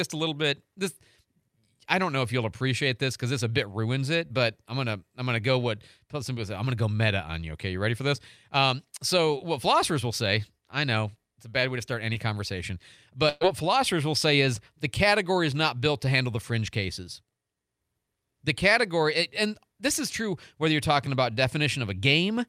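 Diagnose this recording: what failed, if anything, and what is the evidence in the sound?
The network stage dropped packets, heard as short concealed packet loss. About 20 ms went missing at 4.27 s, between "this a bit ruins" and "but I'm gonna I'm". Another 20 ms gap sits at 12.13 s, after "bad way to start". Each time, the decoder continued the preceding sound and blended back in. The result is a brief smear.

A burst of packet loss follows from 13.29 to 13.43 s, just before "philosophers will say is". About 120 ms never arrived in time. The receiver stretched the last sound across the gap and let it fade, with no silence. Speech resumes further on, and that stretch is lost.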